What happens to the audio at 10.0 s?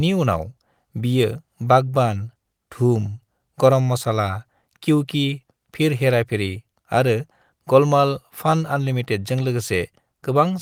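At 10.0 s the speech carries on intact, with no dropout, click, distortion or other fault audible at that moment.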